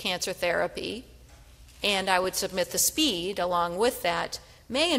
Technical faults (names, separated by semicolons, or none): DAB burbling